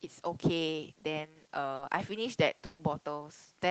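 At 1.75 to 1.81 s a brief smear and wobble passes through the speech, where about 40 ms never arrived in time. This short concealed packet loss was patched by extending the preceding sound and then blending back into the real signal.

From 2.65 to 2.81 s the sound turns into a held, fading continuation, then picks up further along. This burst of packet loss removed about 140 ms. The receiver stretched the last sound and turned it down across the gap, so that stretch of speech is simply gone. The surrounding audio carries the coding texture and the ceiling near 8 kHz that point to a low-rate Opus call path.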